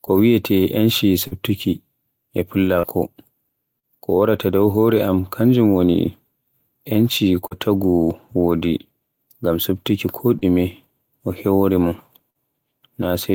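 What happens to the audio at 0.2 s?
Nothing goes wrong at 0.2 s; the speech there plays through intact, with no dropout, click, distortion or other fault.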